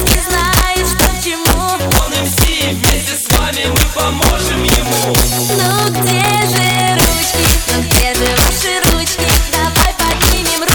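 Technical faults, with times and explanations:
Throughout, integer overflow: the signal runs about 3 dB past the integer ceiling, so the loudest peaks, a small share of samples, wrap to the opposite extreme instead of being limited. Each wrapped peak jumps across the full range, giving harsh cracks far sharper than clipping.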